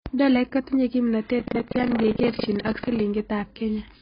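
The whole speech clip is dull and smeared, with nothing above 5.2 kHz, most likely from AAC compression at a very low bitrate, around 16 kbps. From 1.36 to 3.01 s, buffer tearing adds a robotic 25 Hz buzz: a small slice of each buffer replays audio from roughly 0.15 s earlier.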